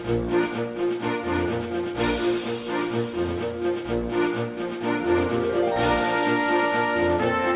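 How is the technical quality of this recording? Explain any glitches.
No glitches can be heard anywhere in the recording. It carries the narrow band of a phone-style call path, with nothing above 4 kHz, and its sound fits a 64 kbps G.711 mu-law codec.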